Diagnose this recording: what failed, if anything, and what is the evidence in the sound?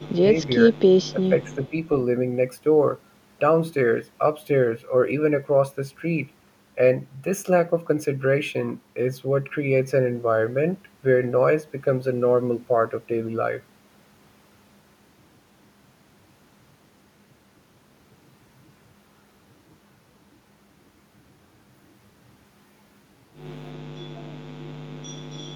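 Echo leak, from 0.00 to 0.06 s and again from 1.53 to 1.71 s, sits in the call processing stage. A faint delayed copy of the speech trails the original by 332 ms, roughly 30 dB below it in the first instance and about 35 dB below in the second. The far end was likely on a loudspeaker, and its echo canceller let part of the microphone pickup return down the line instead of subtracting it.

Speech suppressed in double talk, also in call processing, appears at 0.07 to 0.23 s, 0.68 to 0.75 s and 1.14 to 1.73 s. The level dips in patches, by around 20 dB in the first stretch, a slight 5 dB in the second and about 10 dB in the third. Both sides were likely talking at once, so the canceller could not tell live speech from echo and attenuated everything it heard.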